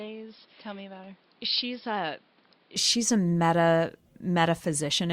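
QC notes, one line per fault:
0.00 to 2.76 s, input switched to a poorer device: the opening is dull and boxy, with nothing above about 5.3 kHz, roughly 10 dB quieter, and with its own hiss sitting around 30 dB under the speech. It opens up cleanly with no gap right before "she's a meta". That narrow band plus the separate level and noise floor points to the recording likely starting on a lesser mic or headset call profile, then swapping back.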